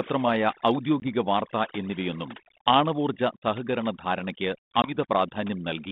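Throughout the speech, overdone noise removal leaves the background at near silence scattered with twinkling specks. The suppressor is cutting whole frequency bands it judges to be noise, and the quieter parts of the voice vanish with them. Unlike a steady codec hiss, this artefact flickers band by band.

At 1.0 s, just before "വാർത്താ എന്നിവയൊന്നും ആണവോർജ സഹകരണ", comes packet loss on an ADPCM call: a hard-edged 20 ms silence, about one packet's worth, after which the speech comes back slightly distorted, with a brief roughness that settles by about 1.07 s. The same happens at 4.82 s, right after "എന്നിവയൊന്നും ആണവോർജ സഹകരണ ധാരണയ്ക്ക്", with recovery by about 4.96 s. What sets these apart from a plain dropout is the recovery after the gap. The decoder's adaptive predictor and step size have drifted from the sender's, so the returning audio stays briefly wrong until they realign. The band-limited line, roughly 150 Hz to 3.7 kHz, fits a 32 kbit/s G.726 path.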